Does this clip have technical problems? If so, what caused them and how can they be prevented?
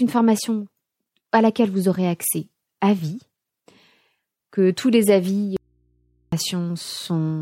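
Yes. An audio dropout to a faint residue runs from 5.57 to 6.32 s. The speech cuts out abruptly, leaving only mains hum roughly 45 dB down. The likely cause is a broken feed into a still-live input. Secure connectors and monitor during recording.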